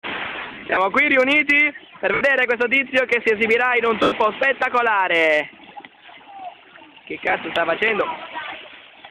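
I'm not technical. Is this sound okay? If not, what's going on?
No. The sound has lost LE Audio frames: pieces of the Bluetooth signal never arrived, so the earbuds or speaker filled the gaps by repeating the last bit of sound with its detail scrambled. That is why it turns into a brief hissy smear instead of going silent like a plain dropout. It happens in bursts from 0.33 to 0.77 s, at 2.14 to 2.21 s, at 4.03 to 4.12 s, and briefly around 7.26 to 7.34 s.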